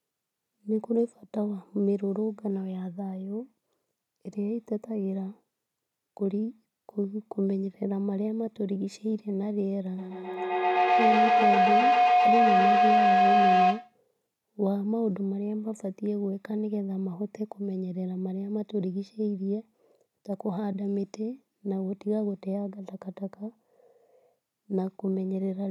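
Speech recording, with a feedback howl from 9.98 to 14.0 s: a tone near 700 Hz builds to about 7 dB above the speech, with repeats roughly 150 ms apart, because two devices in one room on the same call keep re-amplifying each other's output.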